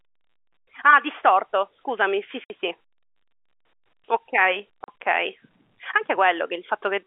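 At 2.44 s the speech drops into a hard 60 ms hole, and at 4.84 s a shorter 40 ms gap follows. This is packet loss filled with silence: stretches of the stream never arrived and the receiver played nothing in their place. Both gaps are whole multiples of 20 ms, which fits 20 ms packets, heard over narrow telephone-band G.711 coding.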